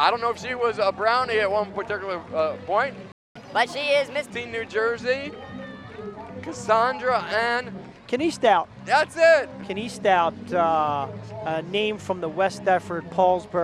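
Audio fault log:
3.12 to 3.36 s, playback stall: the sound cuts out mid-flow into silence for about 236 ms, then resumes. The likely cause is the player running out of buffered data or its thread being blocked, so nothing reached the output until it recovered.
3.36 to 4.30 s, catch-up at higher speed: right after the gap the sound runs 1.25 times fast and sits roughly four semitones sharp, then settles back. The player is resampling its backlog to recover the lost time, which raises speed and pitch together.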